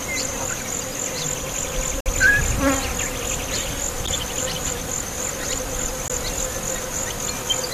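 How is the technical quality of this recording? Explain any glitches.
The recording has three brief dropouts from a gap between stream segments. The audio arrives in 2-second segments, and at three boundaries the timestamps leave a small hole that the player fills with silence. Each gap cuts the sound with hard edges: about 55 ms from 2.00 to 2.06 s, about 10 ms at 4.06 s, and about 19 ms at 6.08 s. They fall roughly every two seconds. Nothing is lost, but the timeline is stretched slightly at each gap.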